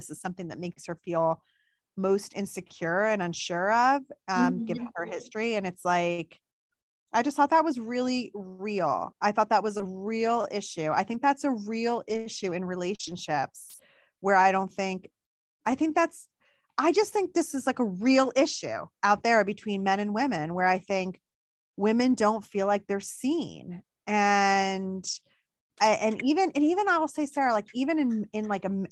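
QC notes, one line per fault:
9.77–9.81 s, short concealed packet loss: after "I thought that was", about 20 ms goes missing and is filled by extending the preceding sound. This gives a brief smear or wobble before "real issue I" rather than a rough patch.
9.79–9.81 s, lost packet rebuilt from error correction: this overlaps the end of that concealment, where 20 ms plays from a low-bitrate copy. It has no gap, just a moment of coarser, noisier texture.
11.13–11.15 s, lost packet rebuilt from error correction: between "real issue I" and "that's a real", 20 ms sounds grainier. Nothing drops out, unlike a concealed loss, because a backup copy filled the slot.
12.09–12.19 s, lost packet rebuilt from error correction: 60 ms of rougher, noisier sound, which fits three lost packets decoded from their reduced-quality copies. The continuity stays intact.
12.95–13.01 s, short concealed packet loss: 40 ms never arrived and was guessed from the prior sound. 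It comes across as a wobbly, smeared stretch where a short consonant may vanish.
12.99–13.13 s, lost packet rebuilt from error correction: overlapping the end of that concealment, 80 ms plays from the low-bitrate copies. It is audible as a coarse, noisy texture rather than a smear.
25.07–25.21 s, lost packet rebuilt from error correction: just before "and even and even", 80 ms turns rough and noisy but stays continuous. That points to four lost packets rebuilt from their backup copies.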